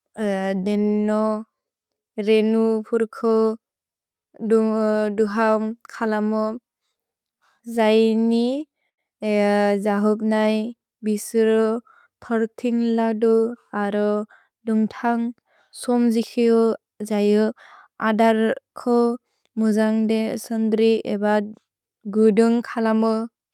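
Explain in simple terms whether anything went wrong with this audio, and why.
Between 7.31 and 9.01 seconds, the audio data arrived late or too slowly, so the playback buffer kept running dry. That caused repeated stalls (stutter). Each time it ran empty, the player stretched the last bit of sound to cover the wait. This happened fifteen times, the longest pause being 88 ms, for about 0.22 seconds of filler in all. No speech is lost, but that stretch drags and stutters.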